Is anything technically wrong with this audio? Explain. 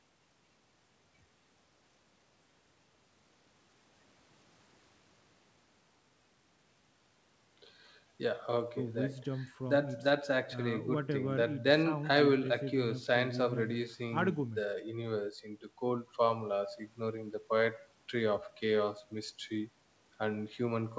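No, nothing is technically wrong with this audio.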